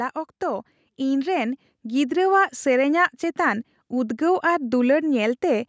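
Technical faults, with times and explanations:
0.39 to 2.25 s: automatic gain rising. The level climbs smoothly by about 6 dB over nearly two seconds. The speech and the background noise swell together. A gain control judged the input too quiet and turned it up gradually, not in one step. Because it rides the whole signal, the noise floor rises with the voice. The call microphone processing also limits the sound to nothing above 8 kHz.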